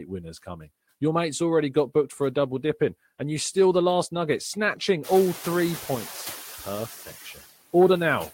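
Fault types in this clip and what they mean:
Noise suppressor artifacts: A noise suppressor works across the whole speech clip. Frame by frame, it picks out the frequency bands that hold steady noise and turns them down. Here it cuts that noise by about 12 dB. So the background sinks in the gaps between words and rises again beneath them. This pumping is clearer once the room noise climbs by about 24 dB at around 5 s, ending up about 15 dB below the speech.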